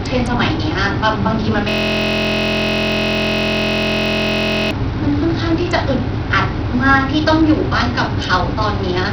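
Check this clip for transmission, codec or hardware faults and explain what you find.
Two faults are present: a system hang loop partway through, and Bluetooth SBC compression damage across the whole speech clip.

From 1.69 to 4.71 s, a system hang loop occurs. The driver froze while the hardware kept replaying one 23.22 ms buffer, which fits a 1024-sample buffer. This produces a steady 43.1 Hz buzz, repeated well over a hundred times.

Throughout, the damage is likely from Bluetooth SBC compression at a starved bit pool, consistent with roughly 64 kbps. The top sub-bands lose their bits, so nothing survives above about 10.3 kHz, and heavy quantisation leaves the speech gritty.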